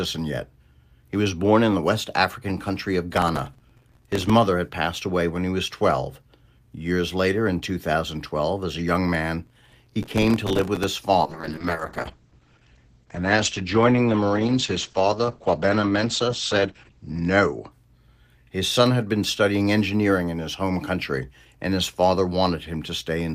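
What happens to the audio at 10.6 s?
At 10.6 s the speech is inside a burst of processor overload crackle, 9.46 to 10.84 s: dozens of missed buffers of a few milliseconds each replay old audio, producing gritty tearing.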